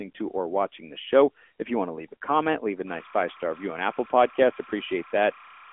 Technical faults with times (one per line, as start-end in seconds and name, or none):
0.00-5.73 AMR narrowband mobile codec